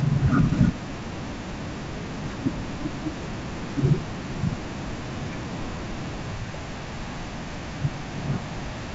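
Nothing's wrong here: the speech simply comes through G.722 wideband telephone coding at 64 kbit/s, with its usual reach up to about 7 kHz.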